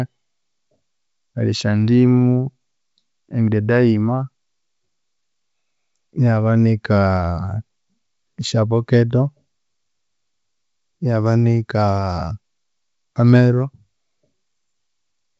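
The speech comes through G.722 wideband telephone coding with no audible faults, its content stopping near 7.7 kHz and carrying so little coding hiss that it points to the full 64 kbit/s mode.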